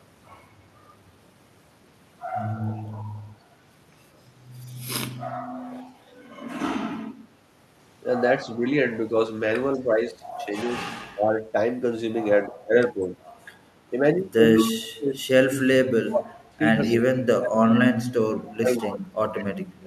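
Speech with the talker's level dipping by up to about 20 dB between 8.38 and 12.97 s, and by up to about 30 dB from 14.63 s onward, likely speech suppressed in double talk. Delayed copies of the voice, about 40 to 10 dB below it and trailing by 193 ms, appear at 9.73, 14.56, 16.84 and 18.81–19.45 s, likely echo leak from a loudspeaker endpoint.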